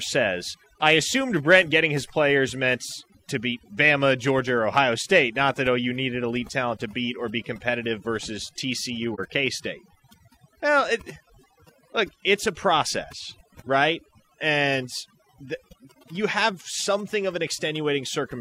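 Across the whole recording, a noise reduction stage was driven far too hard. Any frequency band sitting close to its idea of the background noise gets pushed down almost to nothing, and the softer parts of the speech are caught and removed along with it. Between phrases the background collapses into near silence scattered with twinkling specks. This is overdone noise removal.

At 9.14 s, running to 9.20 s, there is AAC frame loss with muting. The decoder found data missing and zeroed the spectrum for the gap instead of reconstructing it, and a hole of about 43 ms fits a single lost AAC frame. Because the decoder's overlapping windows taper into and out of the silence, the speech fades down and back up rather than cutting off abruptly, leaving a brief, soft-edged dropout.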